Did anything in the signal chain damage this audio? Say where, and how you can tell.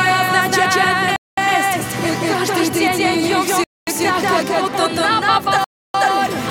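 Yes. A doubled audio track runs through the whole clip, most likely from a second capture path or an edit that left two copies of the same material out of step. A full-band copy, about as loud as the original, trails it by roughly a fifth of a second. It has no decay or room colouring, so every onset sounds twice in a flat, mechanical echo.

At the playback stage there are three Bluetooth stalls, probably caused by interference delaying packets until the headphones' buffer ran empty. The sound cuts to silence from 1.16 to 1.38 s (213 ms), from 3.64 to 3.87 s (234 ms) and from 5.64 to 5.94 s (300 ms). Each time it resumes once the resent packets arrive. The result is three hard dropouts with abrupt edges rather than fades.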